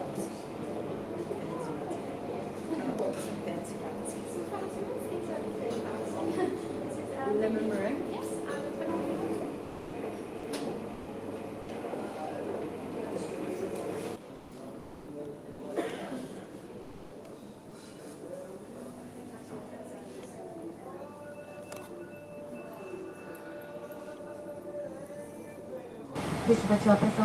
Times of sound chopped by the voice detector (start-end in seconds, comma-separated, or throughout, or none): 9.63-11.07, 14.35-15.59